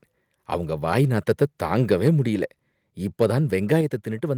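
At 3.81 s the whole speech signal, voice and background together, drops by about 4 dB in a single step: a microphone volume stepped down, likely the call software cutting the device's input gain. On a waveform the envelope shrinks abruptly. A spectrogram shows uniform dimming across all frequencies.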